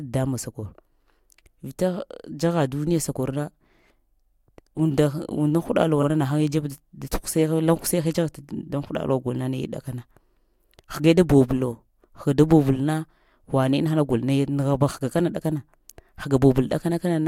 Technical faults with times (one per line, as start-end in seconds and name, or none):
6.02-6.06 repeated frames